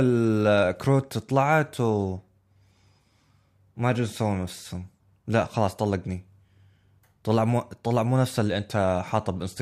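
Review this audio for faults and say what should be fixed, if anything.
Nothing in the signal needs fixing, as the speech comes through with no audible technical disturbance anywhere in the recording.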